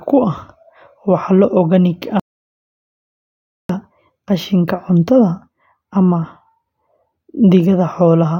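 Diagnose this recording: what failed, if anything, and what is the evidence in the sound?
A playback stall at the playback stage: the speech halts mid-flow at 2.20 s and the output stays silent until 3.69 s, about 1.5 s. A gap that long, rather than a brief dropout or click, points to the player likely running out of buffered data or having its thread blocked.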